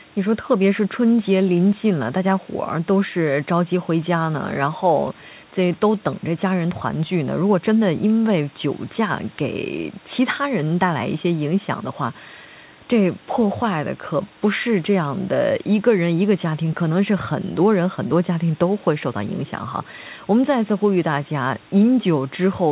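Nothing goes wrong anywhere in this speech, which has come through ordinary call processing and a telephone-style codec, and the lack of anything above about 4 kHz fits G.711 A-law at 64 kbps.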